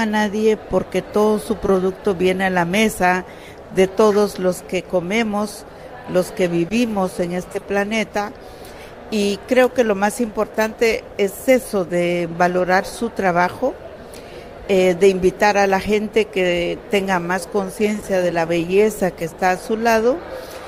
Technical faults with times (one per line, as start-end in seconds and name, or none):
4.11-4.16 corrupt frame decoded
10.50-10.57 corrupt frame decoded